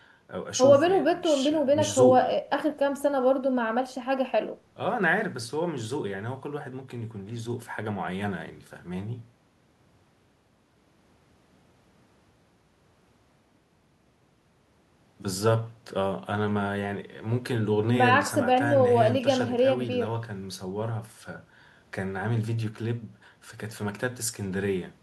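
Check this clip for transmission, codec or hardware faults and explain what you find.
Nothing in the speech signal points to a transmission, codec or hardware problem; level, continuity and bandwidth hold steady throughout the recording.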